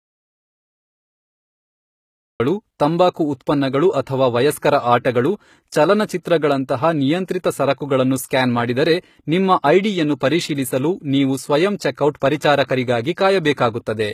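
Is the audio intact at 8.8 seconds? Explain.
No. At 8.8 seconds, as across the whole clip, the speech carries plainly audible damage, likely from HE-AAC compression at a low rate near 20 kbps. The treble is rebuilt from copied lower bands, so sibilants sound gritty and metallic. A spectrogram shows smeared, repeated upper bands ending abruptly at 14.9 kHz.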